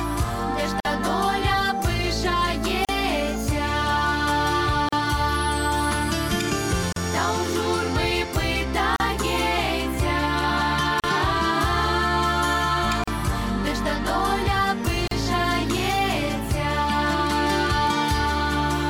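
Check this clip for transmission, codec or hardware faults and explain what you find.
There's one fault here, repeating: a gap at a join of encoded pieces, at 0.80, 2.85, 4.89, 6.93, 8.96, 11.00, 13.04 and 15.08 s, roughly every 2 s. Each is a short dropout, about 49 ms the first time and 38 ms after, with blurred edges. Separately encoded chunks were butted together untrimmed, so encoder start delay and last-frame padding land as silence at each join.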